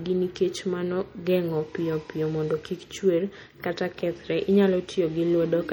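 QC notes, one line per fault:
Throughout, MP3 compression: the encoder likely had too few bits, which fits a bitrate near 48 kbps, so weak frequency lines were zeroed and switched on and off between frames. The codec damage is plainly audible. The speech sounds watery and swirly, sibilants turn metallic and chirpy, and consonant attacks smear. Energy still reaches about 21.4 kHz, so the damage comes from the sparse, flickering detail rather than from a lost top end.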